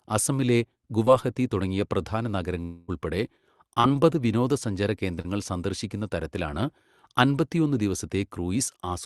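At 1.05 to 1.08 s, just before "തുടങ്ങിയ പ്രധാന", there is a short concealed packet loss. About 20 ms of the speech arrived too late to decode. The receiver bridged the gap by extending the preceding sound and then blended back into the real audio. It is heard as a brief smear.

From 2.62 to 2.90 s, just after "തുടങ്ങിയ പ്രധാന", the speech turns into a fading buzz lasting over a quarter of a second, with no gap of true silence. The real speech returns afterwards, but that stretch is missing. The likely cause is a long network dropout of about 260 ms, with the receiver synthesising sound for almost all of it.

Two more short concealed packet losses follow. The first is at 3.80 to 3.86 s, with about 40 ms lost. The second is at 5.22 to 5.26 s, with about 20 ms lost, just before "സന്ദർശിക്കുന്ന തരത്തിലാണ്". Each is a quick smear or wobble where synthetic continuation covers the gap. The call codec, Opus at 40 kbps, cuts off the sound above 12 kHz.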